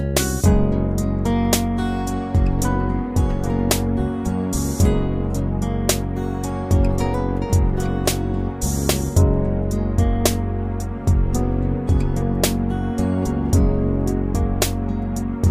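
No technical faults can be heard anywhere in the audio.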